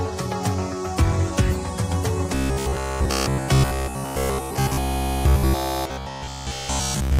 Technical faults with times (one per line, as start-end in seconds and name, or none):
2.35-7.19 robotic sound from repeated short buffers